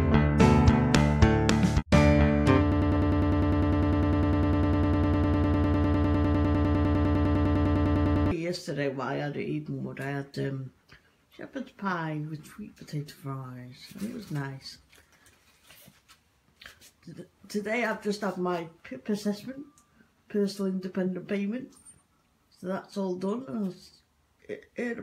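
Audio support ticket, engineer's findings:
Stuttering repeat of a 0.1 s fragment, 2.72–8.31 s: broken-record loop. Likely stalled player or stream resending its last buffer; underlying audio lost.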